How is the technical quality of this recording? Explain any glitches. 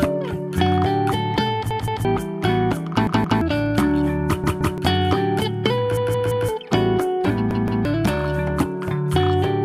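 The recording is marred by five stutters, where a short stretch of sound plays several times in a row with hard joins: 1.71–2.05, 3.07–3.41, 4.44–4.78, 5.97–6.49 and 7.51–7.85 s. Each repeats a piece of about 171 ms, which fits an 8192-sample buffer. Each is a repeated buffer: new audio didn't arrive in time, so the device replayed its last buffer. The piece sounds three times per event, four times at 5.97 s, and roughly 0.3 s of audio is lost each time, about half a second at 5.97 s.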